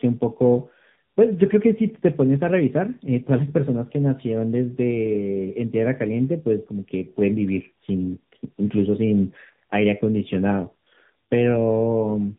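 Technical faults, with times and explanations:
Throughout, tandem speech coding: the speech passed through AMR-NB at 10.2 kbit/s, a G.711 link, then AMR-NB again, so two lossy coders each re-quantise already degraded sound, leaving it rough, muffled and warbly. A spectrogram shows nothing above 3.8 kHz, with smeared, unstable harmonics.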